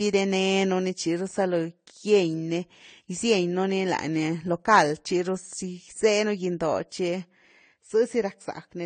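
Throughout, the speech stops at 9 kHz and carries two mismatched, overlapping artefact textures rather than one, likely from transcoding between lossy codecs, consistent with low-bitrate AAC re-encoded as Vorbis.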